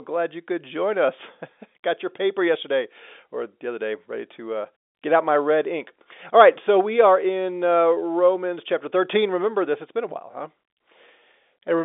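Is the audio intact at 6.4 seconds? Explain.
Yes, the audio is intact at 6.4 seconds: nothing there is cut, damaged or distorted, and the sound has only the narrow band of an ordinary telephone line.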